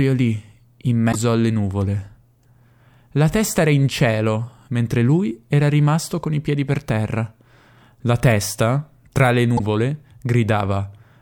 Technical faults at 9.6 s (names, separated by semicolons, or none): damaged data in a compressed stream